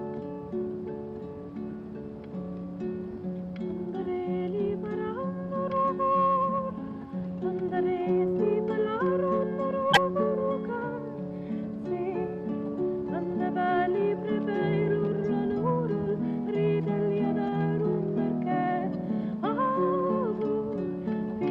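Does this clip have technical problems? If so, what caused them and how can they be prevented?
Yes. Damaged data in a compressed stream causes a brief glitch from 9.89 to 9.97 s, where corrupt frames made the decoder lose sync. Checksummed, error-protected transfer prevents this.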